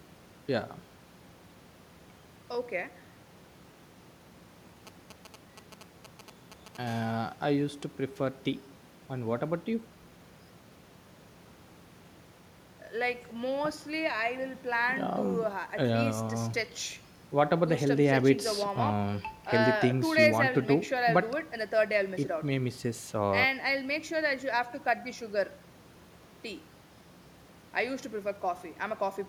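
From 4.87 to 6.77 s, a nearby 2G handset exchanging network signalling emits short clusters of radio bursts, and the audio circuitry rectifies that RF into the speech path. The result is GSM signalling bursts: a galloping dit-dit-dit of short buzzes pulsing at 217 Hz, sitting somewhere around 15 dB below the speech and cutting in and out irregularly rather than holding steady.

At 6.87 s a nearby handset is in a call and transmits in bursts 217 times a second, so the rectified pulses now arrive as a regular, unbroken train. That produces GSM phone buzz: a steady, raspy 217 Hz drone, rich in harmonics and unrelated to the speech, running at about 24 dB below the speech until it stops at 7.70 s.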